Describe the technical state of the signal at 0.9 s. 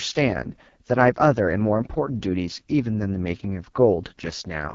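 At 0.9 s the speech carries AMR wideband (HD Voice) codec damage, present across the whole clip rather than at that instant alone. The sound is heavily rough and raspy, which fits AMR-WB running at its lowest rate of about 6.6 kbit/s. At that rate the pulse-driven vocal tract model has too few bits to track the excitation faithfully, leaving a buzzy, grainy texture. Nothing is present above 7.5 kHz.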